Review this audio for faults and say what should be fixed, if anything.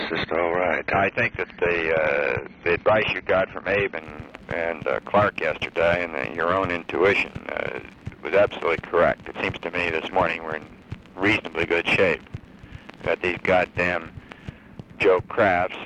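From 0 to 4.0 s the sound is dull and artefact-laden, then sharpens without a gap: an adaptive stream starting at a low bitrate before stepping up. To prevent it, start playback on a higher-quality rendition or hold it briefly until the connection has been measured.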